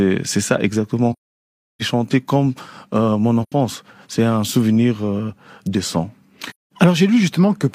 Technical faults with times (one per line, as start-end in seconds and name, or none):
1.12-1.82 AAC frame loss with muting
3.42-3.52 AAC frame loss with muting
6.50-6.71 AAC frame loss with muting